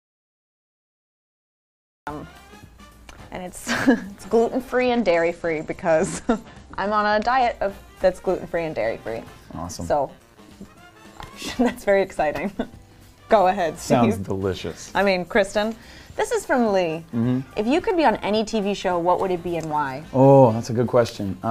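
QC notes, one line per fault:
0.00–2.07 s, audio dropout to silence: The clip opens in digital silence with no room tone at all, and sound only arrives at 2.07 s. The input was likely lost, such as a disconnected device or a mute, while silence kept being written.
4.74–7.54 s, Bluetooth SBC bit pool drop: The treble dulls and a gritty, coarse noise rides on the sound until 7.54 s. This fits the SBC bit pool falling from 31 to 12, near 88 kbps, starving the upper sub-bands and coarsening quantisation.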